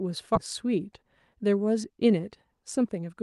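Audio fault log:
0.35–0.37 s, skip ahead: The sound jumps forward with no gap filled in. Roughly 0.7 s of audio never plays. It was dropped while later audio was already waiting, so the two sides of the cut are joined almost directly. The missing stretch shows up as a sudden leap in the speech rather than a pause. The delay drops by about the same amount at that moment.
0.65–3.17 s, jitter buffer speed-up: The speech runs at about 107 percent of normal speed, but the pitch stays the same. The buffer was holding more audio than it wanted. To shrink that delay, the receiver cut many short pieces, each one or a few pitch periods long. In total, roughly a fifth of a second is removed. The talking sounds slightly hurried across this span.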